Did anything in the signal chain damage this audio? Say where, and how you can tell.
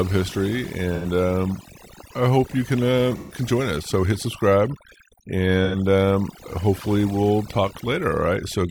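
Yes. Overdone noise removal in the noise-reduction or call-processing stage affects the whole clip. A suppressor set too aggressively drives bands near its noise estimate almost to zero, taking quiet speech detail with them. The background becomes near-silent with twinkling specks. On a spectrogram, the gaps between words look almost empty apart from scattered isolated dots, and faint harmonics break up.

AAC frame loss with concealment in the codec or network path produces three short smeared, phasey patches: 0.95–1.05 s before "um I hope you", 3.17–3.36 s before "join us", and 5.64–5.76 s before "um hopefully we'll". Their lengths, roughly 85 ms and 128 ms, fit two or three lost frames. The decoder repeated the last good spectrum, so the spectrogram shows blurred, static horizontal smears instead of normal speech movement.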